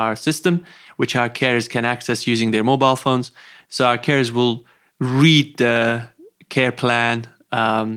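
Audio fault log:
No faults heard anywhere in this speech recording.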